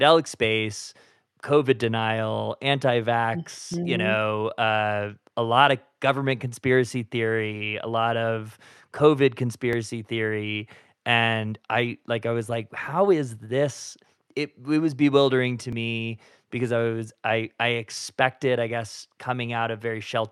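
Audio missing between chunks breaks this speech clip at 3.74 s, just after "denial anti vax", at 9.73 s, and at 15.73 s, between "it was bewildering to" and "me because I". Each is a tiny skip of only a few milliseconds, with the sound on either side butted together and no gap of silence. The even spacing of about 6 s points to the likely cause: a recorder or processor handling audio in 6-second blocks and dropping a sliver at each handover.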